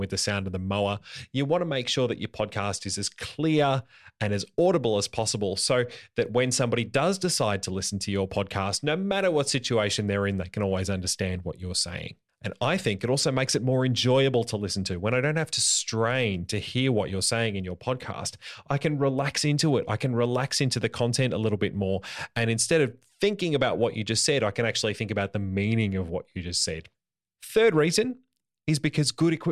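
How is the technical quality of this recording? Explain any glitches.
Good news: there's nothing to explain, because the speech runs along without a single glitch anywhere in the recording.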